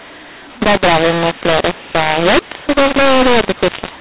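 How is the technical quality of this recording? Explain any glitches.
The recording is poor throughout because of a single decoding fault, a mu-law and A-law mix-up, sitting on an 8 kHz G.711 telephone path.

From start to finish, the speech was written as A-law but read back as mu-law. The two logarithmic scales map the 8-bit codes to different amplitudes, so levels come out scrambled: some samples too loud, others too soft, and near-silent ones pushed well above zero. The result is harsh, grainy distortion with noise filling the pauses. Unlike clipping, it stays rough even at low levels. Unlike ordinary G.711 quantisation noise, it isn't faint or tucked beneath the signal.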